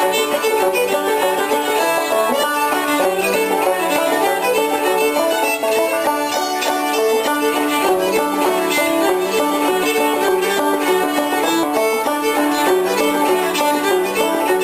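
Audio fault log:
No faults are audible anywhere in this recording.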